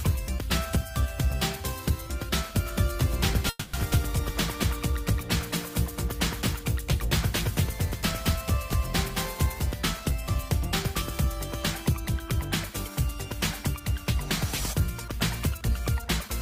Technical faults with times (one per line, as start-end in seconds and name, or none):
2.66-9.72 doubled audio track
3.49-3.75 call audio freeze
14.88-16.29 jitter buffer speed-up